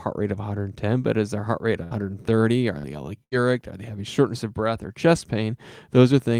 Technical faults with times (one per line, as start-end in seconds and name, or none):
1.83-1.94 burst of packet loss
2.79-2.87 burst of packet loss
3.24-3.34 burst of packet loss